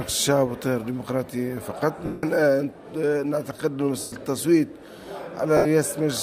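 Lost LE Audio frames at 2.06 to 2.24 s, 4.00 to 4.13 s and 5.57 to 5.66 s. The decoder refilled the gaps with the last spectrum under random signs, fading it, which fits dropped 10 ms frames. Each gap is a noisy smear, a blurred, decaying spectrogram block with a dipping waveform envelope.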